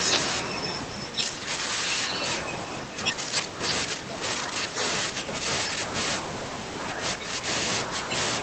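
A speech recording carried over a call path, where the Opus coding cuts the spectrum off at 8 kHz. Its fault is background gated by the echo canceller: while far-end audio played, the canceller clamped the microphone, so room tone dips at 1.23–1.48 s (about 10 dB), 2.88–2.99 s (about 10 dB), 3.15–3.61 s (about 11 dB) and 7.18–7.31 s (about 7 dB). On a waveform the noise floor visibly sinks at each point, and a spectrogram shows matching pale gaps in the background band before it recovers.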